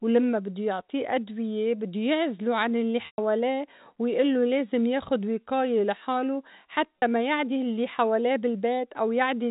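Packet loss with pitch repetition interrupts this speech recording twice. The first gap runs from 3.06 to 3.18 s, right after "بدّو يعزله عن الّي". About 120 ms of audio is missing, consistent with several consecutive packets dropping. The second gap, at 6.99 to 7.02 s between "لازم ياخد وقاية لحاله" and "ما يعدي الّي حواليه", lasts only 30 ms. In each case the decoder fills the hole by looping the last pitch cycle it received. The short gap comes across as a brief buzzy sustain, and the longer one decays toward silence before the speech cross-fades back in. The audio carries the 4 kHz ceiling of G.711 telephone coding.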